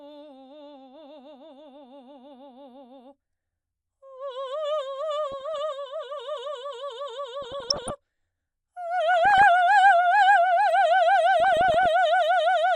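Throughout the music there is a dull, gurgling, granular quality with the top end fluttering in and out. This is MP2 compression, likely from an MPEG Layer II encoder starved of bits at a rate that fits roughly 80 kbps, switching off upper sub-bands and coarsely quantising the rest.

Bursts of DAB burbling, a watery bubbling, break in at 5.32 to 5.56 s, 7.42 to 7.97 s, 9.14 to 9.43 s and 11.40 to 11.86 s. The second is the longest and densest. Weak reception let bit errors slip past error correction, at a rate well under one percent. Corrupted samples put short blips of noise in single sub-bands, and corrupted scale factors make sub-bands jump in level for up to a frame, across what sounds like a dozen or more frames per burst.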